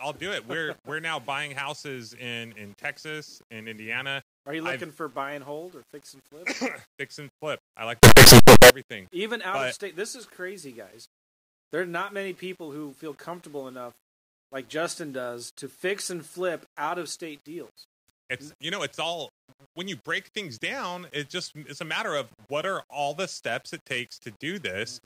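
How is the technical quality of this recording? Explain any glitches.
The recording has one serious glitch, a burst of harsh distortion in the speech.

Signed and unsigned mixed up, 8.03 to 8.7 s, just after "and flip I like": the 8-bit samples were likely read with the wrong sign convention, flipping the top bit so every zero crossing leaps across the full range. Quiet and loud moments alike become a blaring, rasping roar.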